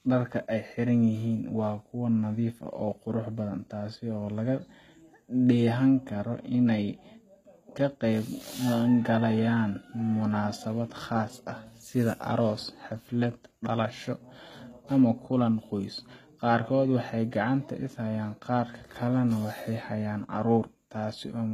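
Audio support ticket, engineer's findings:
Throughout: gritty, lispy s sounds, synthetic-bright treble, nothing above 14.9 kHz. Likely HE-AAC compression near 20 kbps; replicated upper bands misalign harmonics across crossover.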